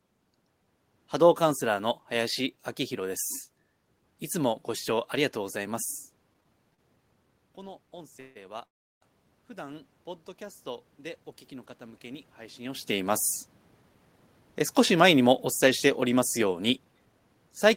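Speech, with several network and level faults. From 6.33 to 6.80 s there are repeated stalls, a stutter. The audio catches four times, each gap filled by stretching the last sound, the longest 34 ms. Packets arrived late, so the jitter buffer kept running empty. Nothing is lost, but about 14 % of that stretch is filler. Automatic gain rising follows from 7.55 to 10.95 s. The input had dropped by about 18 dB, and the gain control lifted everything by about 3 dB. Voice and room noise swell together. A second rise of about 3 dB runs from 11.80 to 13.28 s, near where the talker shifts around 12.5 s. Two call audio freezes sit inside the first rise. At 8.20 s the sound hangs, the last sound carried on for about 0.15 s. At 8.65 s it fades to near silence for about 0.36 s. The likely cause is packets held up in transit, starving the jitter buffer. Each time the audio resumes where it stopped. From 13.47 to 17.20 s a jitter buffer speed-up plays the audio at about 109 % speed. 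Pitch stays the same, but delivery sounds hurried. The receiver is trimming short pitch-period pieces, about 0.4 s in total, to shed built-up delay.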